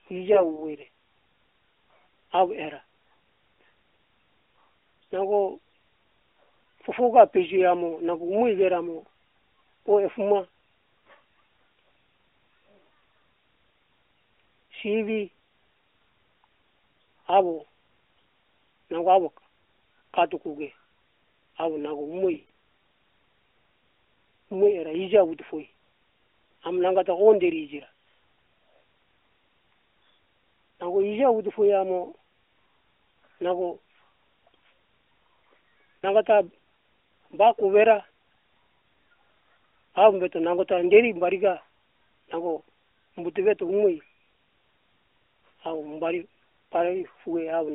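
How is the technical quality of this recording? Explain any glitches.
The recording has three short dropouts from lost AMR speech frames, carried over a light-sounding AMR narrowband phone link limited to roughly 300 Hz to 3.6 kHz. Radio errors corrupted frames, so the decoder repeated its last good settings at falling gain. At 0.34 to 0.66 s, about 20 ms goes missing as a brief dip. At 22.34 to 22.43 s, 120 ms lost across 160 ms, with a 100 ms run, smears and fades. At 35.98 to 36.05 s, 40 ms is drawn out and fades.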